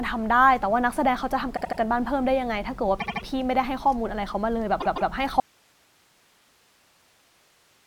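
Speech stutters three times: at 1.56 to 1.79 s and 2.99 to 3.23 s a 78 ms fragment plays four times in a row, and at 4.80 to 5.11 s a 157 ms fragment plays three times. These are repeated frames, where the same run of compressed data was decoded again, stretching the audio by 235 ms, 235 ms and 314 ms. At 5.4 s the sound cuts off abruptly and only hiss, about 40 dB below the speech, remains to the end. This is likely an audio dropout to a faint residue, the signal lost while the path after the break stayed live.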